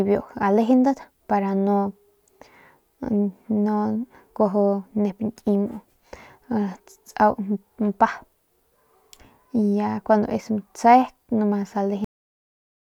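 At 12.04 s the speech stops mid-sound. This is a cut-off end: the final buffers never reached output. Digital silence follows abruptly, with no decay.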